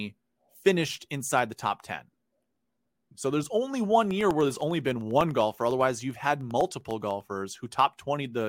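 After "there's only one", from 4.11 to 7.21 s, periodic USB or driver dropouts silence about half a millisecond every 0.1 s. The speech ticks steadily.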